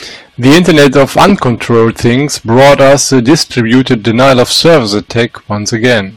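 Hard clipping runs through the whole speech clip. The signal is driven about 18 dB past what the stage can pass, so roughly a tenth of the samples are cut flat. Every loud passage takes on a harsh fuzz. The waveform shows squared-off peaks, and the spectrogram shows added harmonics smeared far upward.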